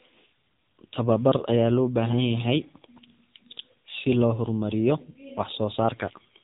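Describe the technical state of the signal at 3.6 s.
AMR narrowband mobile codec damage is present at 3.6 s and runs through the whole clip. The speech has been squeezed through a vocal-tract model that rebuilds each 5 ms from a handful of pulses, and the heavy degradation fits a low rate near 6.7 kbps. Nothing above about 3.8 kHz survives, so the sound is dull and boxed-in, with a buzzy, synthetic edge at that moment.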